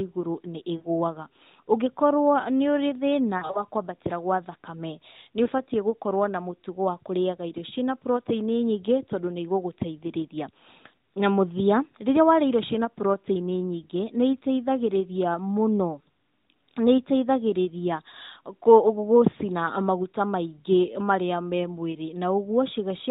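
Lost AMR speech frames: radio errors made frames fail their checksum, so the decoder reused the previous pitch and vocal tract settings at falling gain. At 0.78 to 0.88 s this gives a brief smeared dip, and at 3.38 to 3.64 s, just before "kwambatĩra gwa thakame", a scattered stutter of short warbles. At 5.44 to 5.48 s there is a single quick dip.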